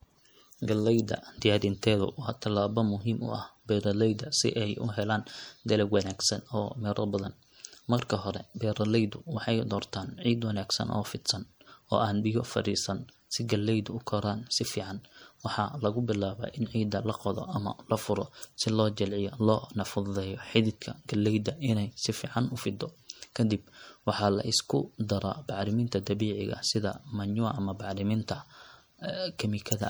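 MP3 compression throughout the speech: weak detail swirls in and out, likely from an encoder starved of bits, fitting roughly 64 kbps.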